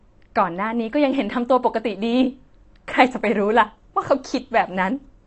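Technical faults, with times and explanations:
Throughout: AAC compression. Nothing is present above 8.6 kHz, and the speech sounds dull and smeared, with a fizzy, warbling texture on sibilants. This likely comes from AAC-LC at a low bitrate, around 32 kbps, where the encoder discards high bands and coarsely quantises the rest.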